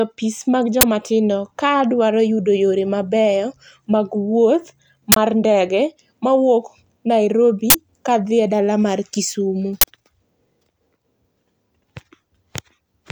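Four harsh bursts of digital noise cut through the speech at 0.81, 5.12, 7.70 and 9.81 s, lasting about 21 or 43 ms each, which fits 1024- and 2048-sample buffers played out before any audio was written, so stale memory came out as an uninitialised buffer.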